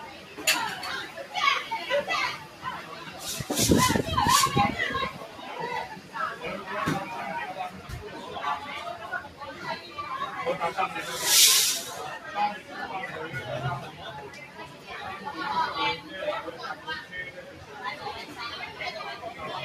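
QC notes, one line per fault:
Throughout: noise suppressor applied to music or sounds. A speech-tuned suppressor treats sustained content as noise, so level swings by around 10 dB and the waveform envelope pumps.
0.06–0.39, 1.08–1.33, 2.43–3.14, 5.24–5.44, 6.00–6.15, 7.74–7.89, 14.46–14.90, 17.36–17.76 s: sound cut by the noise suppressor. Held sound dips about 5 to 6 dB, visible as darker spectrogram patches.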